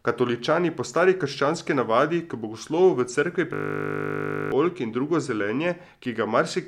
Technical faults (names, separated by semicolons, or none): system hang loop